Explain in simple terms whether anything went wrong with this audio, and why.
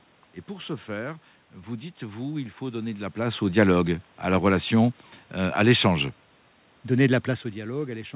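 Nothing went wrong here: the steady room background is part of the recording, the level dips and rises around 3 s and 7 s are the talker moving relative to the microphone, and the muffled, telephone-like tone with nothing above 4 kHz is simply how a standard G.711 call sounds.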